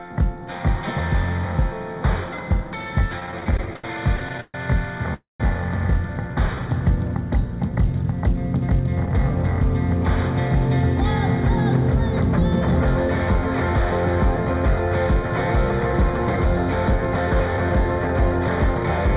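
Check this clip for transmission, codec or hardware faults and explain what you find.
Yes, there are several faults: a constant comb-filter colouring from a small channel offset, and a cluster of jitter-buffer events covering a stuttering stretch, a freeze, a brief slow-down and two speed-ups. The audio also stops at 4 kHz, which fits a narrowband G.711 mu-law call at 64 kbps.

Channel delay (comb filtering) runs through the whole clip. One channel appears to lag the other by only about a fifth of a millisecond, and when the two are summed to mono, content common to both cancels at evenly spaced frequencies starting around 3 kHz. That gives a hollow, slightly phasey tone. The 4 kHz band limit does not explain it, because the codec simply removes everything above a cutoff, while comb filtering carves fixed notches inside the band.

Repeated stalls (stutter) occur from 3.2 to 4.55 s. The sound halts and restarts 16 times. 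The longest hold lasts 134 ms, and the holds add up to 358 ms, about 27% of that stretch. The receiver kept running out of packets, so each time it stretched the last sound until data came in, and nothing was lost. A single freeze is one long halt, but here many short catches make the audio drag and judder.

A call audio freeze follows at 5.14 to 5.41 s. The sound continues as a fading buzz for about 257 ms and spends roughly 160 ms of that in silence, then picks up exactly where it stopped. The likely cause is packets held up in transit, which emptied the jitter buffer. This differs from a dropout because nothing is missing: the audio is paused and shifted later, not cut.

A jitter buffer slow-down appears at 6.28 to 6.69 s. The receiver repeated single pitch periods to rebuild its reserve, adding 54 ms and running at 89% speed. Sounds drawn out at an unchanged pitch, sometimes with a slight warble, identify it. 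A stall stops the flow outright, whereas this keeps moving, only more slowly.

A jitter buffer speed-up occurs twice: 14.29 to 16.46 s at 105% speed, removing about a tenth of a second, and 16.92 to 18.85 s at 107%, removing about 150 ms. The receiver had too much audio queued and trimmed out short pitch-period pieces to cut the delay. The sound hurries while the pitch stays put, which distinguishes it from a playback-rate error, where pitch would rise along with tempo.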